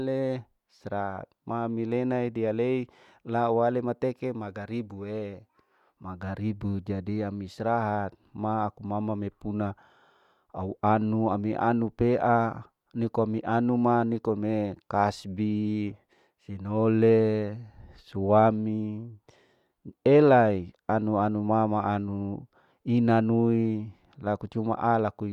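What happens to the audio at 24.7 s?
Nothing goes wrong at 24.7 s: the speech carries on intact there, with no dropout, click or distortion.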